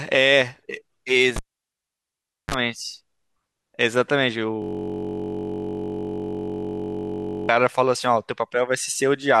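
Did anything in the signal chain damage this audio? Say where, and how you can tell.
Yes. At 1.36 s a cable was pulled and plugged in, a fault in the analogue wiring. A sharp pop opens a gap of near silence lasting about 1.13 s. Just before the sound returns at 2.54 s, a 36 ms burst of 50 Hz mains buzz appears, from the plug tip touching before the ground made contact, and then a second pop. On a waveform the pops are vertical spikes around a flat line. A spectrogram shows a blank gap with a thin stack of 50 Hz harmonics just before the end.

From 4.62 s to 7.49 s there is a system hang loop, at the driver or buffer stage. The software stopped supplying new audio while the hardware kept replaying its ring buffer. A 21.33 ms slice repeats exactly, well over a hundred times, which fits a 1024-sample buffer. At 46.9 repeats per second it is heard as a steady, pitched buzz. On the waveform the same short shape tiles across the whole span. 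A spectrogram shows evenly spaced horizontal lines at multiples of 46.9 Hz, with no change over time.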